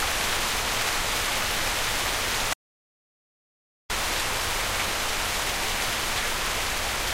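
From 2.53 to 3.90 s an audio dropout to silence cuts the sound abruptly, leaving 1.37 s of silence, likely a lost input link; the waveform flatlines and the spectrogram goes blank.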